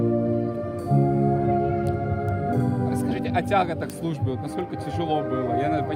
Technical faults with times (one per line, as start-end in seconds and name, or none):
2.29 bit error spike
3.90 bit error spike
4.61 bit error spike